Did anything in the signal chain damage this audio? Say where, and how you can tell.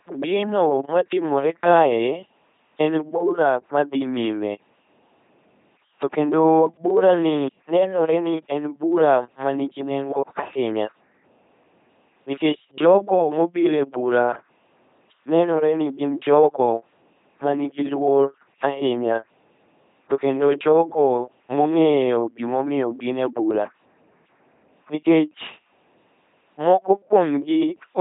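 Yes, at the codec stage: the speech has passed through an LPC-10 vocoder for the whole clip, with heavy damage. It sounds buzzing and robotic, with hiss where voicing is misjudged. Each frame is synthesised from a pulse train or noise through a short all-pole filter, so natural voice texture is lost, which fits a 2.4 kbit/s stream. A spectrogram shows rigid, evenly spaced harmonics, smeared formants, and nothing above 3.7 kHz.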